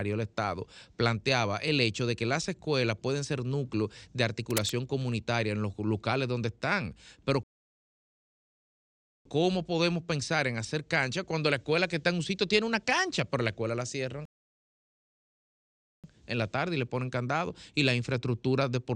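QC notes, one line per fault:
4.50–4.70 s, cable scratch noise: after "pueden ser núcleos de", a dense, uneven rustle about 5 dB below the speech. A loose connector or cable being moved is the likely cause.
7.43 s and 14.25 s, rebuffering stall: the speech cuts to silence for about 1.8 s each time, then resumes where it stopped. The second falls after "pero la escuela la". The player ran dry and waited for data.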